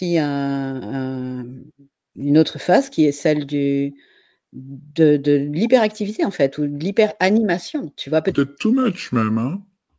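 From about 8.32 s through to the end at 9.98 s, the speech drops into a wrong sample rate problem. The samples get played back slower than they were captured, with nothing converting between the two, so speed and pitch sink together. It runs at roughly 0.73 times normal speed and sits about 5.5 semitones low, which fits audio recorded at 22 kHz being pushed out at 16 kHz. You hear it as a sudden sluggish, deep, dragged-out voice.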